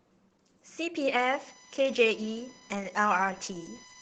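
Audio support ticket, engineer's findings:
Opus voice compression, whole clip: speech muffled, slightly hoarse and robotic, band topping out near 8 kHz. Points to SILK-mode wideband coding at roughly 12 kbps in 20 ms frames, coarse excitation. Unlike plain low-pass filtering, adds roughness, not just dullness.

USB whine, 1.17 s to end: fixed-pitch tone on a 1 kHz fundamental, harmonics strongest at 6 kHz, roughly 25 dB under the speech. USB 1 ms frame current leaking via power/ground. Mains hum sits far lower, at 50/60 Hz multiples.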